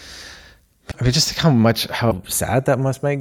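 A speech recording with a slowly moving hollowness when the two channels are heard together, a slow flanging as comb notches creep through the spectrum. This is the channels drifting apart: each side was captured on its own clock, a few tens of ppm out, so the gap between them slides to about a tenth of a millisecond. Brief glitches at 0.90–0.94 s and 2.10–2.13 s sound like the audio lurching forward into a short chirp or scrap of noise. The likely cause is a broken MP3 bit reservoir: with frames removed, the following 24 ms frames reached back for borrowed data and decoded bytes from the wrong frame.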